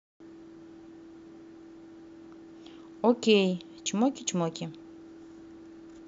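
Nothing stood out on listening to this speech recording.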